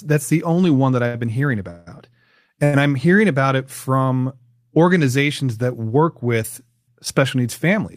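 At 1.07 to 1.16 s the speech hangs briefly, a short stall from a late packet. The jitter buffer ran dry, so the last sound was held for 67 ms with a slight buzz or dip, then resumed exactly where it stopped, losing nothing.

From 1.70 to 1.88 s comes a longer call audio freeze. The sound is continued for 163 ms as a fading buzz or hiss that never drops to silence, likely because packets were held up in transit. Nothing is skipped; the gap simply pushes everything later.

At 2.64 to 2.75 s a second short stall from a late packet stretches the sound for 89 ms. It is held rather than faded into a longer hiss, which marks it as a stall rather than a freeze.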